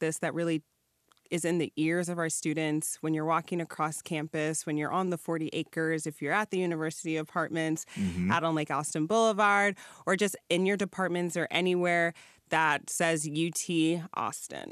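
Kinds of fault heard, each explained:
Nothing here calls for a fault label, since the speech comes across without any technical problems to point to.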